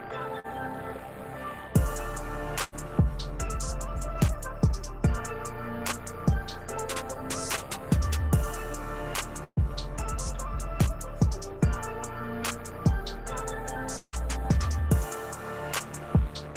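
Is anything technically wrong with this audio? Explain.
Yes, the audio shows network packet loss at four points.

At 0.39 to 0.47 s, a short concealed packet loss: about 40 ms never arrived, and the receiver extended the preceding sound, leaving a brief smear.

At 2.64 to 2.75 s and 9.44 to 9.60 s, a burst of packet loss: 80 ms, then 120 ms went missing. Concealment stretches and fades the last sound before the audio resumes further on; the second gap ends in about 50 ms of silence.

At 13.97 to 14.16 s, the sound is held and fades over about 160 ms, then goes silent for about 60 ms before returning with material skipped, likely a long network dropout.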